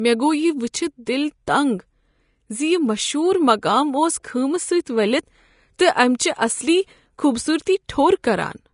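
From start to finish the speech carries plainly audible Vorbis compression, likely from low-quality encoding. The treble sounds hissy and grainy, consonant attacks are smeared, and voiced tones have a roughened edge. That degree of damage fits a bitrate of roughly 35 kbps.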